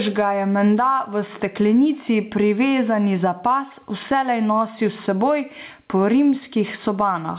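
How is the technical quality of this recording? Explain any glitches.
The main problem is gain pumping, and it runs through the whole clip. The speech comes through a narrowband call path with nothing above 4 kHz, so it sounds like a phone line, but the pumping is what stands out.

Gain pumping: the level swings by something like 15 dB. The likely cause is input gain set far too high, with a fast limiter or compressor pulling the level down on every loud syllable. That gives the squashed sound, with loud and quiet passages pressed close together.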